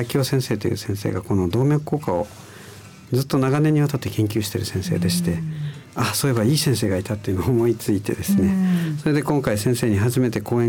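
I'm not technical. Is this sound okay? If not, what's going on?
Yes, it's fine; nothing here sounds wrong.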